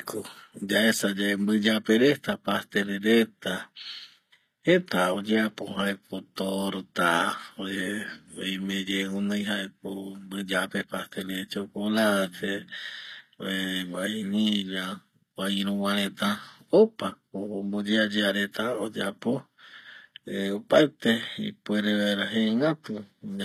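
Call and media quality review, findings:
HE-AAC compression, throughout: gritty, lispy s sounds, synthetic-bright treble. Likely low-bitrate HE-AAC, around 24 kbps; band replication copies lower bands upward, harmonics misaligned above crossover.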